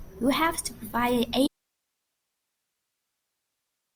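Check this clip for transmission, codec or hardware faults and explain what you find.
An audio dropout to a faint residue occurs: from 1.47 s to the end the link likely lost the signal while staying live, so the speech cuts abruptly to hiss far below its level.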